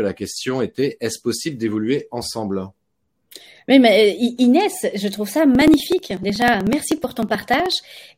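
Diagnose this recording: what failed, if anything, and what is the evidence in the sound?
Periodic USB or driver dropouts: from 5.55 s, after "je trouve ça", to 8.09 s the speech ticks every 62 ms, each losing roughly 2 ms.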